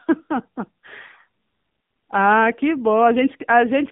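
From start to finish the speech carries the AMR narrowband mobile codec sound of a 2G or 3G phone call. The band runs from about 150 Hz to 3.6 kHz, so sibilants lose their hiss and the voice sounds thin and boxed. The damage is plainly audible, a buzzy, synthetic edge that fits a low mode near 8 kbps. On a spectrogram the energy stops at a hard ceiling near 3.6 kHz, with empty space above.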